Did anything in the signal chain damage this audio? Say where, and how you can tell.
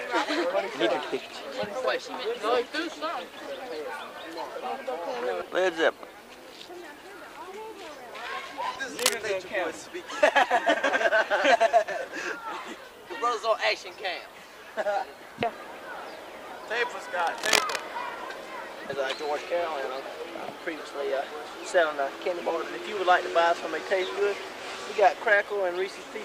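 Yes, the analogue wiring. There are two bursts of cable scratch noise. The first runs from 8.99 to 9.14 s and stands out a little above the sound. The second runs from 17.19 to 17.84 s at about the same level as the sound. Both are dense, uneven scratching laid over the audio rather than replacing it. The likely cause is a worn cable, connector or control being moved, so that its contact resistance jumped rapidly.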